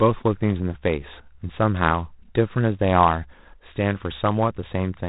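From the first moment to the last, the speech carries G.726 ADPCM coding damage. Its sound points to the 24 kbit/s rate. That leaves three bits per sample to code the difference from an adaptive prediction. So few bits give a coarse step size. The error becomes a harsh, rasping hiss that rises and falls with the speech level. The band also stops at 3.8 kHz, so the top end sounds dull and boxed-in.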